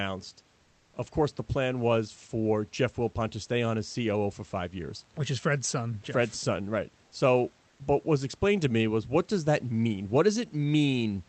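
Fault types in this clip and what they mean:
Comfort noise in place of the background: from 7.69 to 7.79 s a steady, featureless noise, at unchanged level, replaces the real room background, likely from Opus discontinuous transmission.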